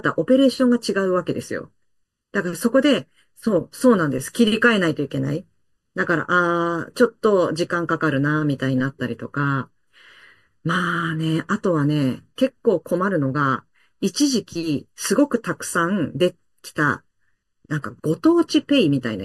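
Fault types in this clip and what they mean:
Channel delay (comb filtering): Throughout the speech, the sound is hollow and phasey, as if heard through a tube, with a dip near 700 Hz and further dips spaced evenly above it, around 2 kHz and 3.5 kHz and upward. One channel arrives late by under a millisecond, and when the two are summed to mono, the shared signal cancels at those evenly spaced frequencies. The result is a fixed comb of notches that never moves.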